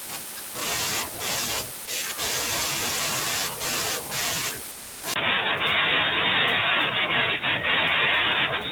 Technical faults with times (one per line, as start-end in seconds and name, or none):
1.85-1.87 sound dropped by the voice detector
4.71-5.03 sound dropped by the voice detector
5.14-8.72 input switched to a poorer device